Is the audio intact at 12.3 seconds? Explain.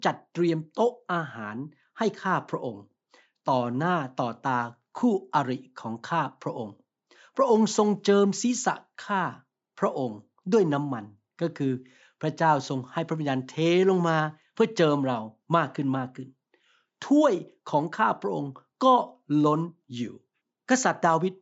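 Yes, at 12.3 seconds the speech is intact, with nothing there beyond the ordinary call microphone processing, which trims the lowest bass and carries nothing above 8 kHz.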